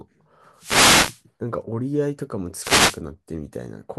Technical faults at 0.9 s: wireless microphone noise hit

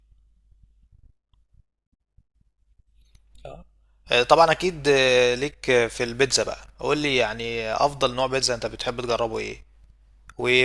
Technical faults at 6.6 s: none

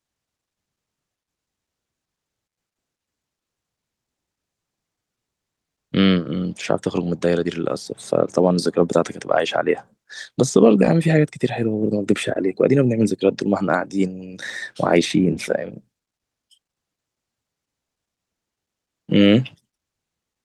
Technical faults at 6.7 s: none

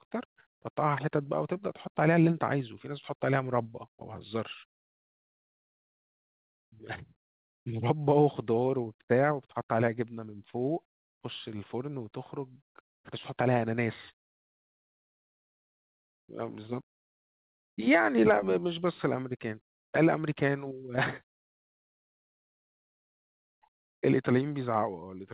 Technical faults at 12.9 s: long network dropout

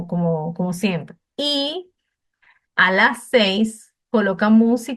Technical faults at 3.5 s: corrupt frame decoded

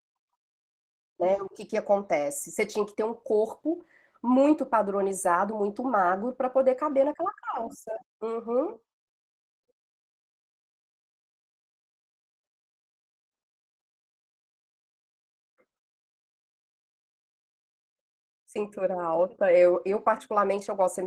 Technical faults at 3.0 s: Opus voice compression

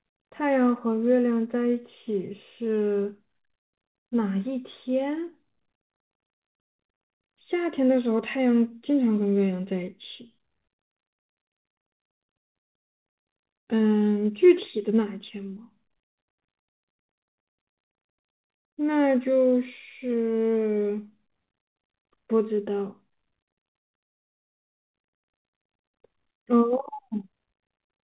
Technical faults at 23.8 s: short concealed packet loss; burst of packet loss

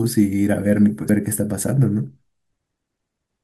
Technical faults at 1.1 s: damaged data in a compressed stream

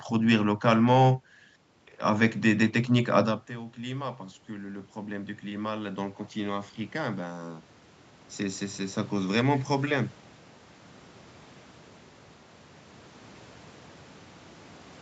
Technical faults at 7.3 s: automatic gain rising

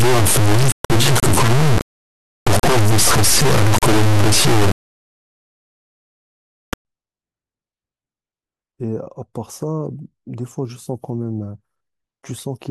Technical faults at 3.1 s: integer read as float

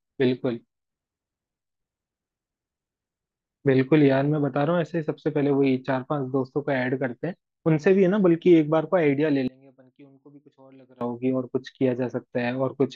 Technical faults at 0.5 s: none

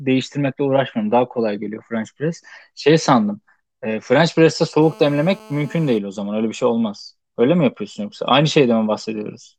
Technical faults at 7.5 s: none

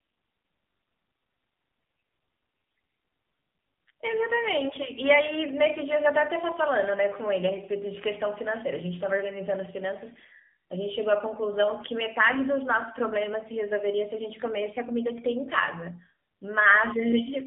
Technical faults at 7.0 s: AMR narrowband mobile codec

